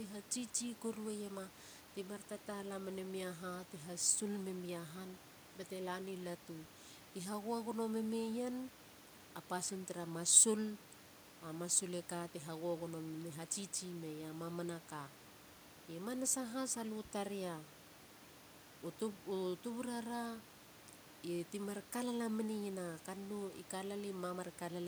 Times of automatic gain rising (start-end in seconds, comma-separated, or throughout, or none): none